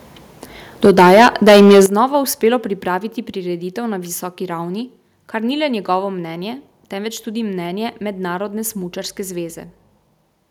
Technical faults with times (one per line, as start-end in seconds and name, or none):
0.84-1.82 microphone overload
0.86 microphone volume stepped down
1.86 microphone volume stepped down